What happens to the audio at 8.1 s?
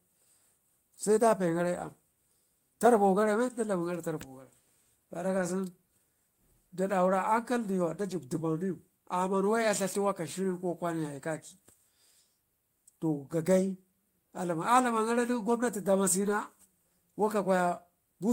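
At 8.11 s there's a lost packet rebuilt from error correction. About 20 ms of speech, consistent with a single dropped packet, was played back from the low-bitrate copy carried in the next one, so there's no gap, just a brief rougher, noisier patch.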